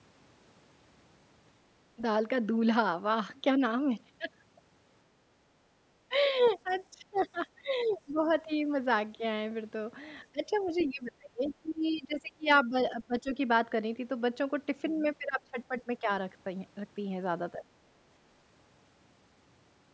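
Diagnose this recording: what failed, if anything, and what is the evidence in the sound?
Speech suppressed in double talk, at the call-processing stage: the voice dips by up to about 20 dB at 1.96, 6.08–8.28, 10.24–13.39, 15.19–16.08 and 17.56 s. That's likely the echo canceller ducking everything while both ends talk.

Other side's voice leaking through, also in call processing: a faint second voice, about 20 dB down, at 6.41–8.34 and 10.67–10.87 s, plus a trace at 11.72–11.98 s. It's likely loudspeaker echo the canceller missed.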